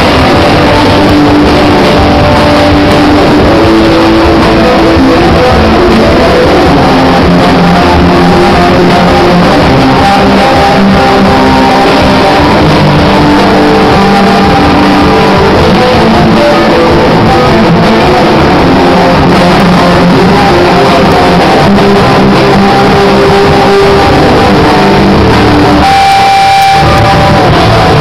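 Integer overflow cracks at 1.10, 2.92, 19.60, 21.12 and 26.12 s, plus a stretch from 26.62 to 26.98 s. Peaks pushed about 0 dB past the integer limit wrap around to the opposite sign instead of being limited, so the waveform jumps across the full range.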